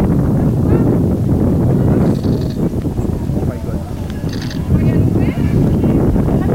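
Low bit depth without dither runs through the whole clip. A grainy distortion rides on the sound, roughly 30 dB down, and quiet stretches turn gritty or sputter. The likely cause is undithered truncation, which fits 7-bit samples, so the error tracks the signal.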